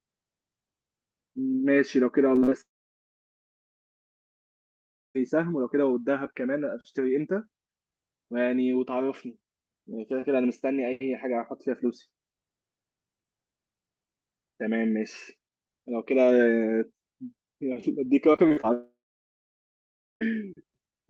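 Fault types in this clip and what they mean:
Repeated packet loss (robotic sound): Small pieces of audio were lost in quick succession. Each hole was filled by stretching the preceding sound. Around 2.35 to 2.53 s and 18.33 to 18.65 s, the audio turns choppy, with gaps up to 47 ms.
Long network dropout: At 2.61 s the sound becomes a brief fading buzz or hiss, then silence until 5.17 s. The same happens from 18.73 to 20.23 s. The likely cause is audio that stopped arriving over the network. The missing stretch never returns.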